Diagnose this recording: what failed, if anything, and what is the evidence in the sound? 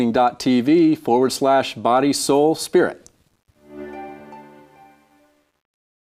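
Truncation distortion on a fade runs from 3.09 s to 6.2 s. This is a sample-format conversion fault. The fade-out, starting around 3 s, turns gritty and, from 4.17 s, is at its worst. That points to undithered requantisation to a 10-bit word length, with the decaying waveform collapsing into coarse steps.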